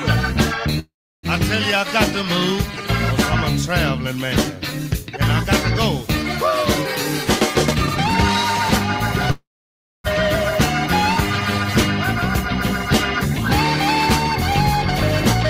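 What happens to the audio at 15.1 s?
Nothing goes wrong at 15.1 s; the audio plays through that moment intact, with no dropout, click or distortion.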